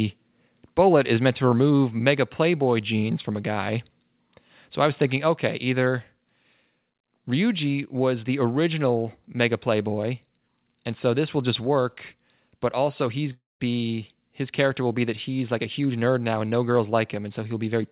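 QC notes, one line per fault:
1.17 s and 5.31 s, microphone volume stepped down: the level drops suddenly by about 2 dB, then about 1 dB, voice and background together. This is likely the call software lowering the mic input gain in a single step each time after judging it too hot.
13.32–13.62 s, long network dropout: about 0.28 s of audio never arrives, likely packets lost in transit. The receiver stretches the last sound into a fading buzz, about 0.19 s of the gap is silent, and the speech resumes further on with that stretch missing. Over the whole clip you can also hear the narrowband G.711 call path, with nothing above 4 kHz.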